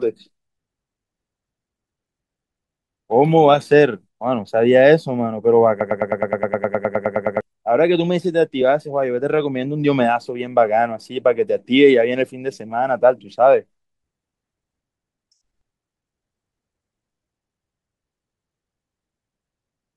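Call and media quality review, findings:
Broken-record loop, 5.81–7.41 s. Speech cuts to a single fragment of about 104 ms, repeated exactly 15 times back to back, roughly 1.6 s of stutter. Likely cause: player or decoder stall, with the output re-serving the last buffered chunk until data resumed. Content that should have played across that span is missing, not delayed. Playback continues normally after 7.41 s. Check jitter-buffer underrun handling and the decoder's concealment path.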